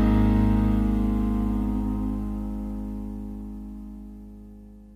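No technical faults can be heard in this audio.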